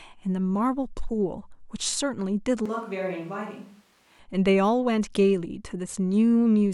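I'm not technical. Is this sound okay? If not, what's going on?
No. From 2.66 to 4.19 seconds the speech turns hollow, roomy, quieter and thinner, then snaps back: likely a switch to a distant microphone.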